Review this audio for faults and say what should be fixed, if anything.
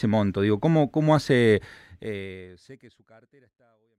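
Nothing here needs fixing. The smooth fade-out starting around 1.5 s brings the speech gradually down to silence by 4.0 s, with no click or hard edge.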